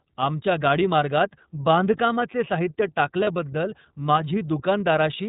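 iLBC codec coding runs through the whole clip. With nothing above 4 kHz and each 30 ms frame coded independently, the speech sounds plainly rough and synthetic, which fits the 13.33 kbps mode.

Lost iLBC frames occur at 1.53 s and again from 3.24 to 3.28 s, each about 30 ms. The decoder repeats the last pitch cycle mixed with noise, giving a brief buzzy held vowel before the speech recovers at once.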